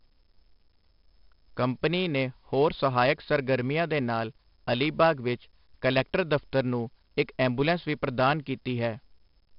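Right from the start and all the way through, the speech carries heavy 4-bit ADPCM compression. Each sample is coded as a coarse step from a predicted value, so the error rides along with the level, giving a gritty hiss on every loud syllable and roughness on sharp onsets where the step size lags. Nothing survives above about 5.4 kHz, which dulls the sound and points to a rate of roughly 44 kbps.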